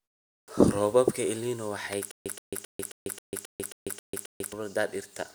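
At 0.41 s the speech begins abruptly, its first 69 ms or so missing, up to about 0.48 s. This is a clipped start after a pause: the output device had gone idle during the 0.41 s of silence before it, and the opening of the utterance was swallowed while the device woke and locked on again. The speech snaps on from nothing.

At 1.93 s there is a sharp snap lasting only a few milliseconds, sitting on top of the speech without disturbing it. This is an electrical switching spike, likely from a nearby switch, relay or static discharge arcing briefly and coupling into the audio line. It reads as a tight, bright click with no tonal character, which separates it from a dropout or a buffer glitch.

From 2.11 s to 4.53 s the audio falls into a stutter with silent gaps. A 123 ms fragment of speech plays, then about 145 ms of digital silence follows, and the cycle repeats every 268 ms, nine times in all. 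The likely cause is a stalled player or stream that replayed its last buffered fragment at each retry before running empty again. The speech that should have filled those 2.4 s is lost.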